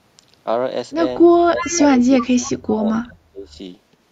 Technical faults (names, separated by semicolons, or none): speech suppressed in double talk; echo leak